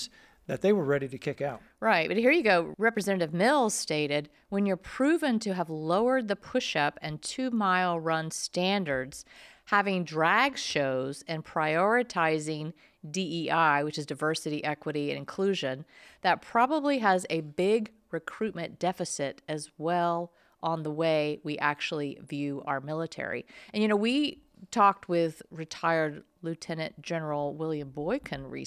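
Listening through the speech recording, nothing technically wrong stood out at any point.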